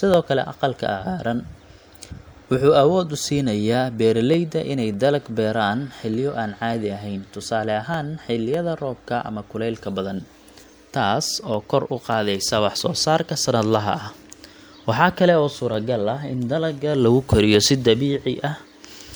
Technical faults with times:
0.14-18.74 clock drift buffer slips

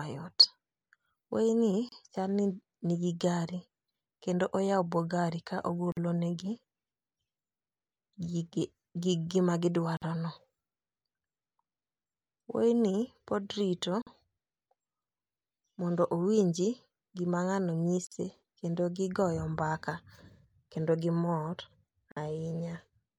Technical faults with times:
1.89-1.92 gap at a join of encoded pieces
5.92-5.97 gap at a join of encoded pieces
9.97-10.02 gap at a join of encoded pieces
14.02-14.07 gap at a join of encoded pieces
18.07-18.12 gap at a join of encoded pieces
22.12-22.17 gap at a join of encoded pieces

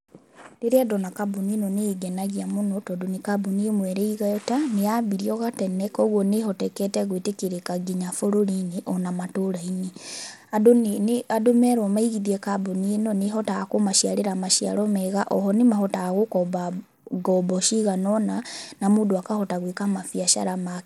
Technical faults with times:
0.00-20.86 Bluetooth SBC compression

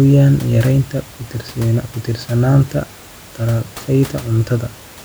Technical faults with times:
none

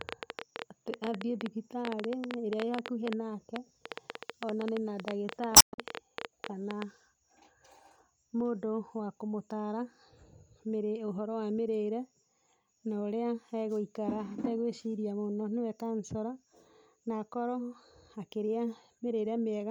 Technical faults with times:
0.01-6.83 train of clicks
5.56-5.79 damaged data in a compressed stream

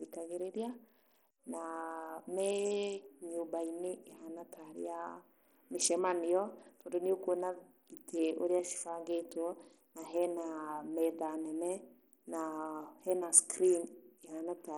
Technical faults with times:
0.00-14.77 Bluetooth SBC compression

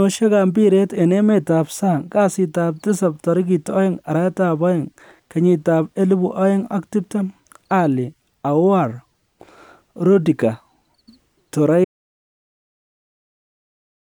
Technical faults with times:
11.85-14.03 audio dropout to silence

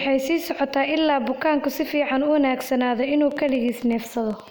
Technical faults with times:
3.31-4.49 train of clicks

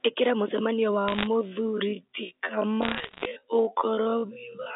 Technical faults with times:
0.95-4.75 time-stretched section
1.08-1.27 bit errors on a digital phone line
2.82-3.25 bit errors on a digital phone line

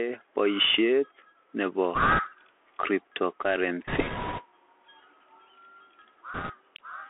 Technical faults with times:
0.00-7.10 Bluetooth CVSD headset codec
1.95-2.19 bit errors on a Bluetooth voice link
3.87-4.44 bit errors on a Bluetooth voice link
6.34-6.53 bit errors on a Bluetooth voice link

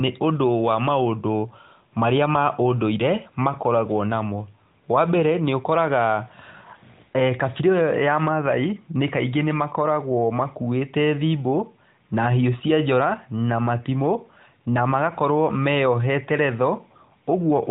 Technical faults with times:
none

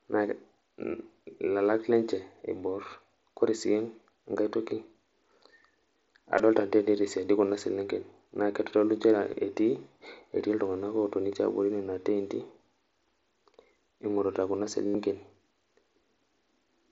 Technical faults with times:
2.22 concealed Bluetooth headset packet loss
6.38 concealed Bluetooth headset packet loss
9.33 concealed Bluetooth headset packet loss
14.86-14.95 concealed Bluetooth headset packet loss

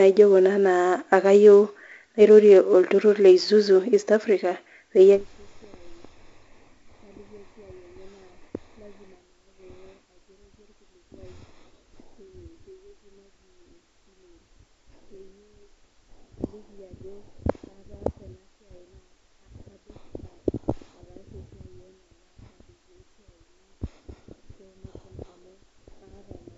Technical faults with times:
0.00-26.57 4-bit ADPCM compression

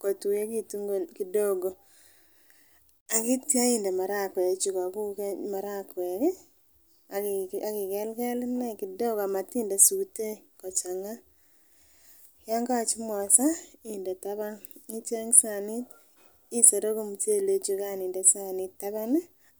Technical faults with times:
none

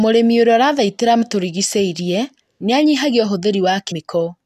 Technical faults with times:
1.21 damaged data in a compressed stream
3.90 damaged data in a compressed stream

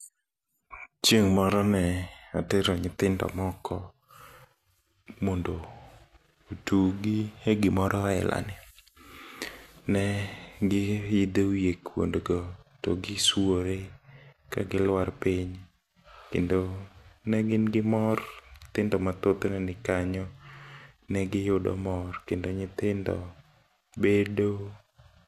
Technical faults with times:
none

